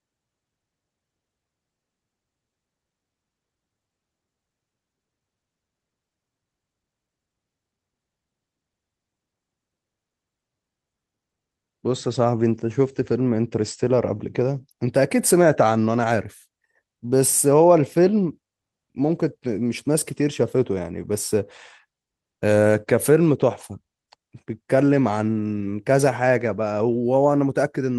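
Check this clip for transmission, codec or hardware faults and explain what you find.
No faults can be heard in this recording.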